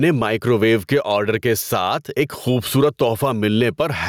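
From start to finish the speech has gain pumping. Each loud syllable pulls the level down. The swing is around 10 dB, and loud and quiet parts come out squashed close together. The likely cause is input gain set far too hot, with a fast limiter or compressor clamping down on every peak.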